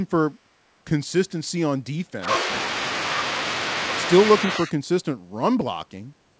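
From 1.29 to 1.33 s a brief delayed copy of speech surfaces, about 435 ms behind its source and far down, around 40 dB below the talker. This is most likely an echo leak: a loudspeaker-side echo canceller let a scrap of the played-back voice return. Unlike a dropout, it adds sound rather than removing it.

At 2.16 to 2.27 s the speech dips by roughly 15 dB over about a tenth of a second, and again at 4.66 to 4.74 s by roughly 10 dB over about 70 ms. This is likely speech suppressed in double talk, where the canceller, unable to separate the local talker from loudspeaker echo, turned both down. These are dips in the voice, with no extra delayed copy. Throughout, the band stops near 8 kHz, as expected from the call path.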